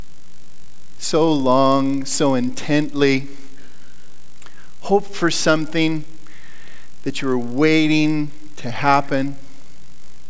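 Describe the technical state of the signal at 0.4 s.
Resampler restarted on every block, at 0.4 s as throughout: each 20 ms block is converted blind to its neighbours, leaving edge errors heard as a 50 Hz buzz under the signal.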